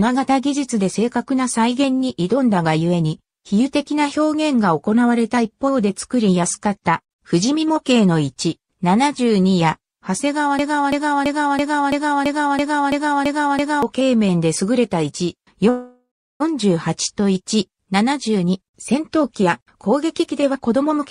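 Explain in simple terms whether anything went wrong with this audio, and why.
A broken-record loop runs from 10.59 to 13.83 s. The player or stream likely stalled and kept resending the last piece it held, so a third-of-a-second fragment repeats ten times back to back, and whatever should have played then is lost.

A call audio freeze follows from 15.69 to 16.42 s. Packets likely got held up and the receiver ran out of audio, so it stretched the last sound into a fading buzz for about 0.7 s, the final 0.35 s being silence. The sound then resumes where it stopped, with nothing missing.

A jitter buffer speed-up covers 17.71 to 20.99 s. The receiver had piled up more audio than it wanted, so it trimmed many tiny slices, around half a second in total. The sound plays about 14% faster at unchanged pitch and feels hurried.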